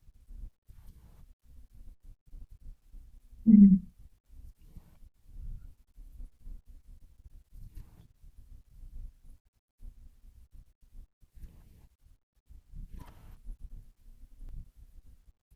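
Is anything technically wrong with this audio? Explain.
Yes. At 7.34 s and 14.49 s the speech jumps abruptly, skipping roughly 150 ms without any gap of silence. This is likely a dropped buffer (overrun): recording samples were overwritten before being collected, so the surrounding audio is spliced together.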